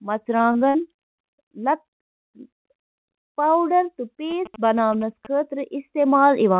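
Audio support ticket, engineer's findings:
Repeated packet loss (robotic sound), 0.38 to 1.09 s: six gaps up to 52 ms, about a fifth of the stretch filled by jitter-buffer concealment. Holes recur too closely to recover, unlike one isolated smear.

Short concealed packet loss, 1.81 to 1.86 s: one brief smear. Roughly 40 ms never reached the decoder and was patched by extending the preceding sound. It is a single event, not a robotic run.

GSM signalling bursts, 4.31 to 5.27 s: galloping dit-dit-dit of short 217 Hz buzzes, well below the speech level. A nearby 2G phone's signalling is rectified in the analogue stage. The steady buzz rate and absence of dropouts separate it from packet loss. Audio throughout stops at 4 kHz, which fits the G.711 narrowband call path.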